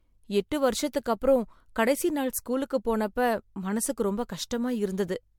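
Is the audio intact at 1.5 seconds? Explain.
No. At 1.5 seconds the speech sounds swirly and hollow, with a smeared, watery texture and soft, blurred consonant attacks, more degraded than a single lossy pass at this quality would be. This is generation loss, present throughout the clip. The likely cause is repeated MP3 decoding and re-encoding, about four passes at a bitrate near 100 kbit/s. Each pass quantises on a shifted frame grid, so noise and spectral holes accumulate even though the bandwidth still reaches about 20 kHz.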